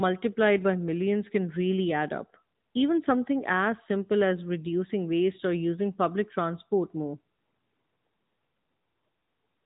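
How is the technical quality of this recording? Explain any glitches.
The recording quality is clearly degraded. One fault runs through the whole clip.

AMR narrowband mobile codec damage is plainly audible from start to end. Nothing above 3.8 kHz survives, so the speech sounds thin and muffled. The codec rebuilds each 20 ms frame from a vocal-tract model and a few pulses. The buzzy, synthetic edge fits a mid-rate AMR-NB mode near 10 kbps.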